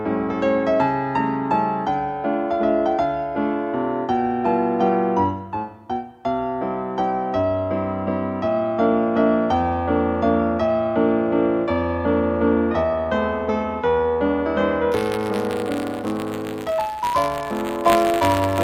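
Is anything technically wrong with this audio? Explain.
Yes. Buffer tearing from 14.91 s to the end: writer and playback pointers cross inside each period, splicing in a sliver of roughly 20 ms-old audio, producing a persistent 100 Hz robotic buzz.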